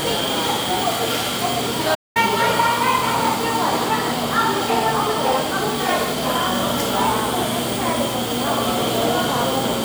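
At 1.94 s the sound cuts out abruptly and stays silent until 2.17 s, a playback stall of about 206 ms, likely from the player running short of data or being blocked. On a waveform it appears as a flat gap; on a spectrogram, a blank vertical band.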